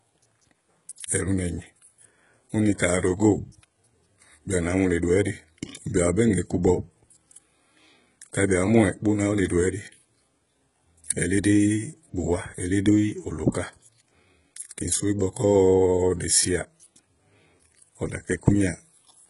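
Throughout the speech, the sound points to a likely HE-AAC compression stage running at a very low rate, which fits about 12 kbps. The treble is rebuilt from copied lower bands rather than coded, so s sounds turn heavily gritty and metallic, with nothing above 11 kHz.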